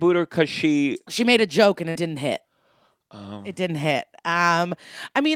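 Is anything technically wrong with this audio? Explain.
Yes, there are two faults. At 1.23 s there is a block of digital silence: about 1 ms of samples drops abruptly to silence and back without a fade, producing a short tick. From 1.89 to 1.97 s there is a burst of packet loss: the receiver holds the last sound and fades it over about 56 ms, then playback resumes with roughly 60 ms of speech missing.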